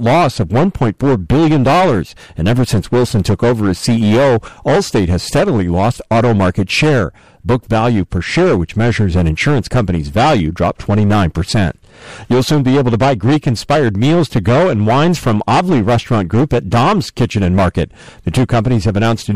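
Hard clipping runs throughout: the signal overdrives a stage by about 12 dB, flattening around a seventh of samples and turning every loud passage into harsh fuzz.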